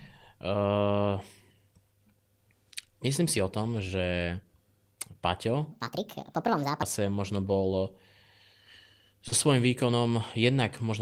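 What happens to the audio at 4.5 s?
Nothing goes wrong at 4.5 s; the speech runs through that moment intact, with no dropout, click or other fault.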